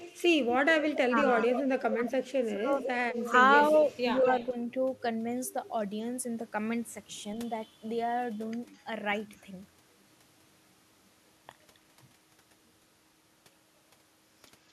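Speech with echo leak from 0.0 to 2.07, 2.81 to 3.32, 3.73 to 4.52 and 8.75 to 8.84 s. A copy trailing by about 200 ms appears as ghosted spectrogram harmonics, strongest early and faint by 8.8 s, likely from a far-end loudspeaker the echo canceller missed. Speech suppressed in double talk dips the waveform envelope at 1.08 to 1.15, 1.94 to 2.75, 3.19 to 3.34 and 4.2 to 4.56 s. The longest dip falls roughly 20 dB, and the last is only slight. The likely cause is the canceller ducking both talkers while they overlapped.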